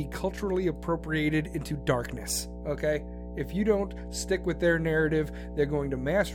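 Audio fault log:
throughout, mains hum: a steady 60 Hz tone with a few low harmonics sits under the speech at roughly 10 dB below it, loud enough to hear in every pause. A ground loop or nearby transformer is letting the power line leak into the signal path.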